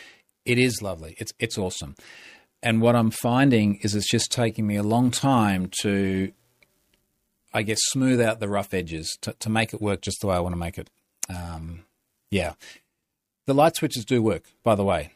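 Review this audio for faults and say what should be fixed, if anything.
No faults are audible in this speech, so nothing needs to be fixed.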